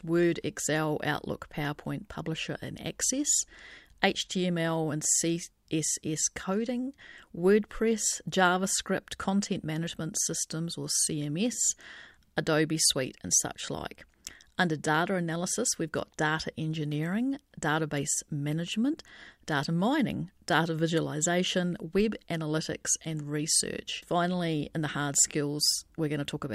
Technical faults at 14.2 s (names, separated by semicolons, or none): none